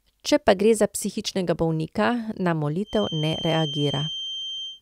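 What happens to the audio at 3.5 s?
A thin feedback whistle near 3.1 kHz, swelling and fading slowly, sits about 10 dB below the speech from 2.82 s, after "za psihičnega bolnika na", to the end, likely from a speaker-to-microphone loop hovering at the edge of runaway.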